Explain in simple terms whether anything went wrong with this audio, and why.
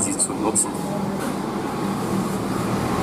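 A brief glitch at 0.75 to 0.77 s breaks into the sound as a quick chirp, squawk, click or tiny gap. That's damaged data in a compressed stream: a bit of the file was corrupted, so the player misread that spot and had to find its place again.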